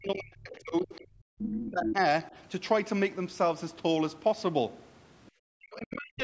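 From the start to 2.0 s the speech is pulled down hard, by roughly 40 dB at its deepest. This is speech suppressed in double talk, likely because the echo canceller treated the talker as loudspeaker echo while both sides spoke. A brief dip of about 10 dB follows at 2.3 s, and another deep cut runs from 5.55 s to the end. Unlike dropouts, these dips follow the overlap rather than arriving at random.

Inside that first stretch, the other side's voice is leaking through. A faint scrap at 0.53 to 0.59 s sits about 20 dB under the talker. A longer stretch from 1.4 to 1.92 s comes within about 5 dB. This is likely residual loudspeaker echo, which adds a second voice where suppression only removes sound.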